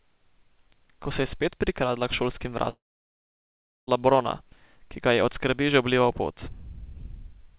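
Long network dropout from 2.7 to 3.89 s: a brief fading buzz gives way to about 1.1 s of silence, likely from lost packets, and the sound resumes with that stretch missing.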